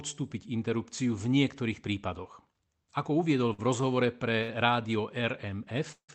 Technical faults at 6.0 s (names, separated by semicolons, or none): call audio freeze